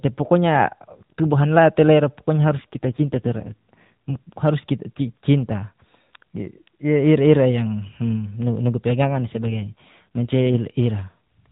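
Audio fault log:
2.58 to 4.33 s, AMR rate drop: right after "la te ira pokonya" the speech goes rougher and more synthetic, then clears up by "harus kita cinta". It sounds like the codec stepping down from roughly 12.2 to 5.9 kbps to spend bits on error protection, so the band stays narrowband and nothing drops out.
9.02 to 10.57 s, AMR rate drop: same buzzy degradation for about 1.6 s, again fitting a drop to 5.9 kbps before returning to the lightly coded 12.2 kbps sound.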